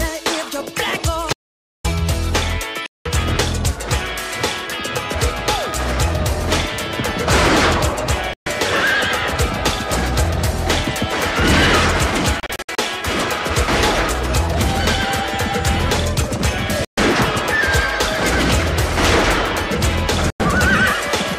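The audio cuts out abruptly at 1.33 s and returns at 1.84 s, leaving about half a second of dead digital silence with no room tone underneath. That hard, total gap is the signature of an audio dropout to silence. The likely cause is that the input feed was briefly lost, from a dropped connection or an accidental mute, while the recorder kept writing silence, so whatever happened in that half second is simply gone. A second set of faults is digital broadcast dropout, heard as short muted holes where the receiver blanked the output until clean data returned. The holes fall at 2.86 to 3.06 s, 8.34 to 8.47 s, 16.85 to 16.98 s and 20.30 to 20.40 s. Between 12.40 and 12.79 s the damage is broken into several brief stutters, none longer than 64 ms, rather than a single gap. Every hole lasts a multiple of 32 ms, which fits whole compressed frames being discarded after failing their error check.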